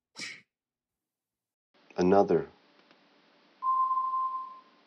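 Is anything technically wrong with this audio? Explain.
Yes. At 1.54 s the sound drops out for 0.2 s, then runs to the end dull and boxy, with nothing above 6.1 kHz, a level shift of a few decibels and a new faint noise floor. The likely cause is the input switched to a poorer device with a narrower band and its own noise.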